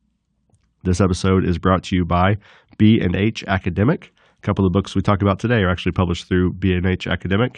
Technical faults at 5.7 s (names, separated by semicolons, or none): none